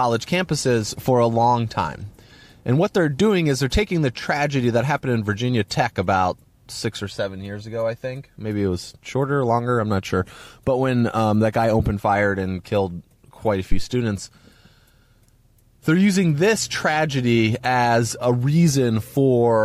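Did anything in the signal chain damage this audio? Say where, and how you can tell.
Yes. A phantom power thump sits at the analogue input stage, from 13.72 to 13.84 s in this speech clip: a deep, low-frequency thud peaking at about -7 dBFS that dies away within roughly 28 ms. Switching the supply on or off on a live input puts a DC step through the coupling capacitors, which the preamp passes as a single low pulse. Unlike a plosive or handling bump, it comes from an electrical step in the supply rather than from air or contact.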